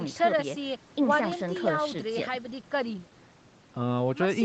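Nothing is technically wrong with this speech clip, which comes through a call path that carries nothing above 8 kHz.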